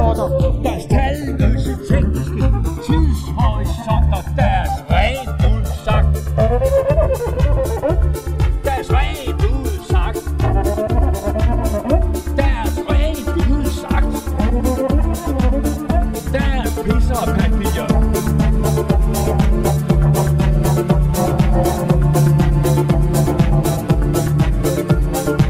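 From the start, the channels drift apart: the two sides run on separate clocks that disagree by a few hundred ppm, so the delay between them creeps up to around 7 ms by the end. In mono this is slow flanging, seen on a spectrogram as comb notches sweeping gradually across frequency.

From 7.35 to 7.37 s, lost LE Audio frames cause a brief noisy smear where tonal content breaks into hiss. The LC3 decoder repeats the last spectrum with randomised signs. The 20 ms gap fits two lost frames and shows as blurred, noise-like texture replacing clean harmonics.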